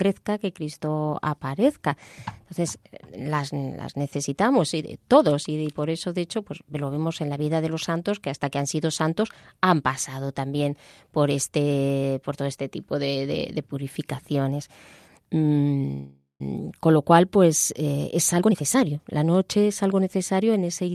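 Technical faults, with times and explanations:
15.92–16.42 s, call audio freeze: the speech halts for about half a second. The last sound is stretched into a fading buzz or hiss that decays to silence for the final 140 ms, then the speech resumes exactly where it stopped. Nothing is lost; roughly 480 ms of fill has been inserted, pushing everything after it later by that amount. This is the pattern of delayed packets likely leaving the jitter buffer empty until they arrive.
17.93–20.89 s, jitter buffer speed-up: the speech runs at about 112% of normal rate with its pitch unchanged, so it sounds hurried rather than higher. Around 0.4 s of audio is trimmed away in many small cuts of one or a few pitch periods each. The buffer, holding more audio than it aims for, is being drained back toward its target delay.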